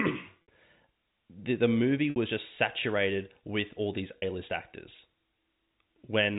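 At 0.42 s, 2.10 s and 4.18 s the speech shows packet loss with pitch repetition: gaps of 60, 60 and 40 ms, which fits 20 ms packets, are bridged by looping the last pitch period, so each sounds like a briefly held, buzzy tone rather than a silent dropout or a clicky stutter. The G.711 telephone band stays at 4 kHz throughout.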